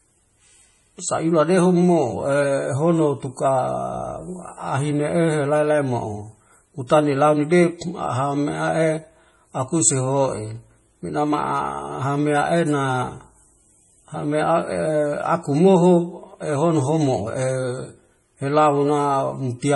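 Heavy lossy encoding, likely MP3, runs from start to finish. Starved of bits, the encoder drops everything above 11.3 kHz and discards the quieter frequency lines, which then drop in and out from one frame to the next. The damage is severe enough to fit a 32 kbps encode. The speech comes across dull and watery, with a swirling, metallic shimmer on s sounds and softened, smeared consonant onsets.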